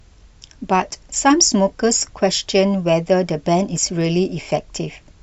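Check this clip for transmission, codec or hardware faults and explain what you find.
There's one fault here: CD scratch ticks, four of them between 3.29 and 4.01 s. A blemish on the disc wipes out more data than error correction can rebuild, once per revolution, so the player patches or mutes the gap, leaving short clicks of at most a couple of milliseconds.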